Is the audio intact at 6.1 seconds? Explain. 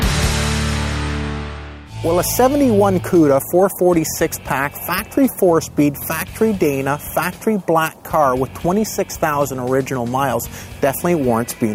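Yes, at 6.1 seconds the audio runs on cleanly, with no dropout, click, distortion or other fault in the signal there.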